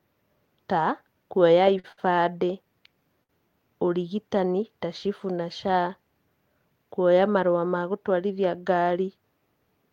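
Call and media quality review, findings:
Short stall from a late packet, jitter buffer underrun, three times: 1.79–1.86 s and 1.92–1.99 s after "ta kũoya", 3.23–3.31 s before "ũrigitani ta". Receiver held last sound 44–57 ms; nothing lost, sound drawn out with slight buzz or dip.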